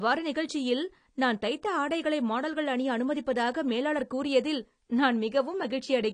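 AAC compression artefacts run throughout the speech, with plainly audible damage and nothing above 10 kHz. The likely cause is an AAC-LC encode at a low bitrate, in the region of 32 kbps. With so few bits, the encoder drops the top of the spectrum and coarsely quantises what remains. Sibilants lose their crispness and take on a fizzy, swirling edge, sustained sounds warble, and the whole clip sounds dull and smeared.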